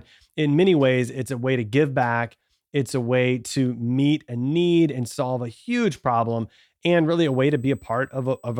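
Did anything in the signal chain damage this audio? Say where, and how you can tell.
Yes: USB whine, picked up in the analogue wiring through shared power or ground. The bus's 125-microsecond microframes draw current that leaks in, producing a steady 8 kHz tone from 7.24 s to 8.60 s, faint at roughly 40 dB below the speech.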